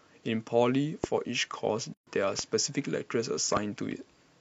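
Speech, broken by three sharp loud pops, at 1.04 to 1.06 s, 2.39 to 2.41 s and 3.57 to 3.59 s. Each is a single crack about 15 dB above the speech, which continues underneath. The likely cause is a voltage spike from a plug, switch, static or driver glitch. At 1.94 to 2.07 s the speech drops into a 130 ms silence with smeared edges, then resumes where it stopped. This is a gap at a join of encoded pieces: separately encoded pieces, about 4 s each, were joined without trimming the encoder's start delay and end padding.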